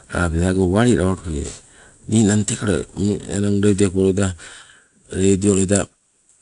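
From start to finish the speech carries plainly audible 4-bit ADPCM compression. Each sample is coded as a coarse step from a prediction, so a gritty hiss rides on the louder syllables and falls back in pauses, unlike fixed background hiss. Nothing sounds above 10.6 kHz, which points to a 22 kHz sample rate.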